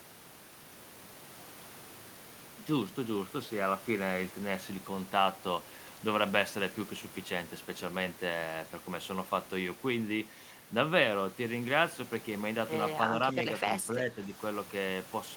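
From 13.91 to 14.32 s the speech sags by roughly 5 dB for about a third of a second. This is speech suppressed in double talk, likely an echo canceller turning down both sides at once. Unlike a dropout, the level dips rather than vanishing.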